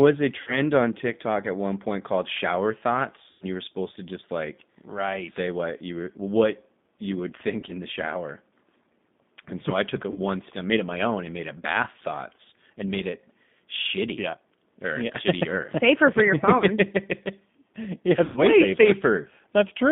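Speech comes through a G.729 codec, which fits an 8 kbit/s G.729A stream. The sound is confined to roughly 150 Hz to 3.6 kHz. Its rebuilt, pulse-driven excitation gives a plainly rough, synthetic edge to the speech. There is VoIP packet loss concealed by the speech codec at 0.42–0.60, 3.30–3.45, 7.60–7.73, 10.11–10.20, 16.58–16.64 and 18.26–18.40 s. The decoder stretches its last pitch and filter into a fading buzzy tone or coloured noise over gaps of 20 to 110 ms. The speech stays weak or distorted briefly after each gap.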